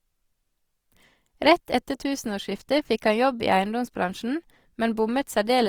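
Throughout, likely Opus compression in CELT mode, fitting a rate near 24 kbps, fills starved bands with noise, so the speech sounds grainy and rough up to 20.4 kHz.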